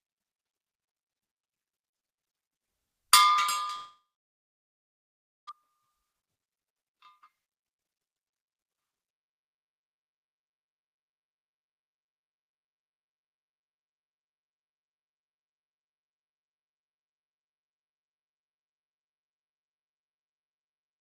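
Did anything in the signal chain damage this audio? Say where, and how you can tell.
Yes. A long network dropout likely starved the receiver from 3.75 to 5.51 s. The sound fades into a buzz or hiss, then silence, and about a second is lost.

At the jitter buffer, a speed-up from 6.86 to 13.6 s clipped out short pitch-period pieces, roughly 0.7 s in all. The sound runs 10% fast with its pitch unchanged.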